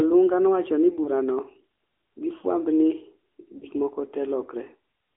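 Throughout, the speech has passed through the AMR narrowband mobile codec, at a rate that points to the 10.2 kbps mode. The codec rebuilds speech from a compact vocal-tract model and a sparse pulse excitation, and the line passes only about 200 Hz to 3.4 kHz. The result is a thin, boxy voice with no high-end air and a plainly audible buzzy, synthetic edge.

At 1.04 to 1.10 s, lost AMR speech frames cause a brief glitch, consistent with a single 20 ms frame failing its checksum. The decoder fills the gap by reusing the previous pitch and spectral settings at reduced gain, which produces a short dip or warble. At 3.58 to 3.67 s a longer gap, fitting about 40 ms of lost frames, brings a longer smeared, weakened stretch before the voice returns.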